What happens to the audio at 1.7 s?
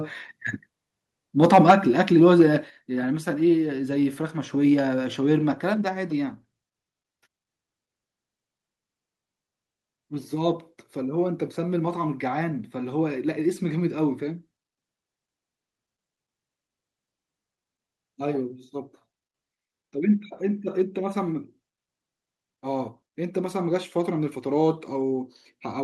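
Between 1.43 and 1.74 s the loudest peaks are flattened, giving a harsh, crackling edge, the signature of microphone overload: input level running about 6 dB too hot, likely driving the converter past full scale so a small fraction of samples are clipped. At 1.71 s, near the end of that distorted stretch, both the speech and the background drop by about 3 dB in one abrupt step. This is a microphone volume step-down, likely the call software reacting to the clipping by cutting the device's input volume in a single move.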